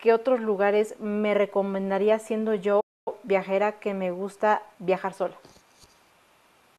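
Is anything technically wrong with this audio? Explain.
Yes. From 2.80 to 3.08 s the speech cuts to silence for about 260 ms, then resumes: a playback stall, likely the player starving for data or its thread blocking.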